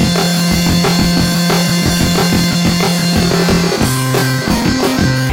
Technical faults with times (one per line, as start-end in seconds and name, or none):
0.00-5.33 planar audio read as interleaved